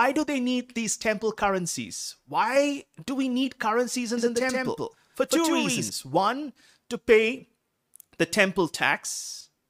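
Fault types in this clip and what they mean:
Doubled audio track: from 4.18 to 5.90 s, right after "do we need currencies", a full-band copy of the speech trails about 150 ms behind at roughly equal level, cutting in and out abruptly without decay, likely from a slower capture path or misaligned edit.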